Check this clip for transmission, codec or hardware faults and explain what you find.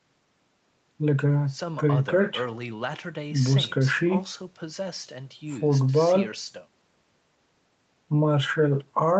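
Nothing here sounds like a transmission, codec or hardware problem, just speech that has come through an ordinary call chain, with the top end stopping around 8 kHz, as expected for that kind of path.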